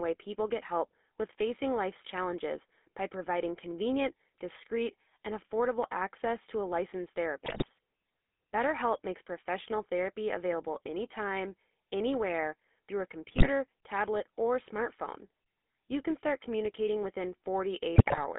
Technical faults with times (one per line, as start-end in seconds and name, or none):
0.00-18.38 GSM full-rate codec
7.46-7.70 GSM bit errors
13.28-13.49 GSM bit errors
17.96-18.19 GSM bit errors